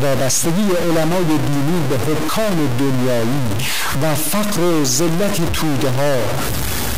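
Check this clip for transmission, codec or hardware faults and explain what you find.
One hardware fault runs through the whole clip. A stuck bit, likely from a broken data line or converter, holds one fairly high bit fixed, knocking about half the samples off by a step around -15 dBFS. Speech turns harsh and buzzy, and pauses fill with loud noise.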